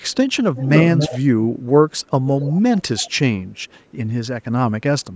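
Echo leak appears at 0.01–0.36, 0.55–1.19, 1.9–2.06, 2.26–2.6, 2.79–3.14 and 3.55–3.91 s. A copy of the speech trails it by 280 ms. An echo canceller likely missed loudspeaker sound. The echo is strongest at 0.55 s and barely audible at 0.01, 1.9 and 3.55 s.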